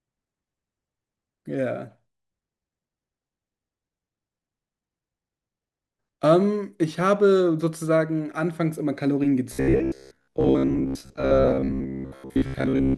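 From 9.53 s to the end, robotic sound from repeated short buffers: a fixed 66.8 Hz buzz, likely a looping 15 ms slice rather than silent dropouts.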